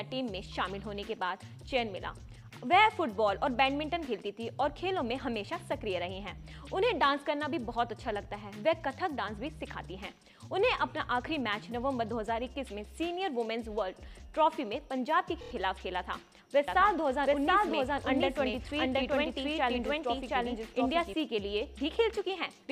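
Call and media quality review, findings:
Repeated frames, 15.40–15.51 s: one 26.1 ms compressed frame replayed four extra times, a rapid stutter, adding 104.5 ms. Identical short block, unlike a delayed copy.

Doubled audio track, 16.68–21.14 s: a full-band second copy about 0.7 s behind at roughly equal level, starting and stopping abruptly, with no decay or room colour, unlike echo. It is likely a slower capture path mixed in.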